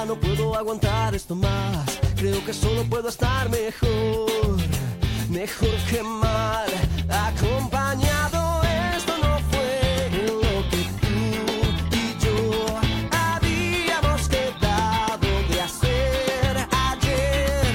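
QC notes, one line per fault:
No fault found.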